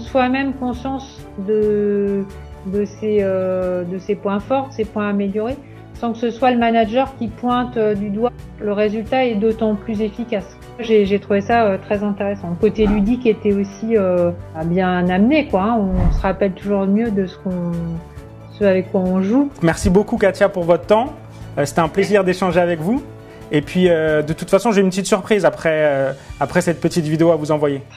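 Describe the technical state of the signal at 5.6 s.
The audio is intact at 5.6 s, with no audible fault at that point.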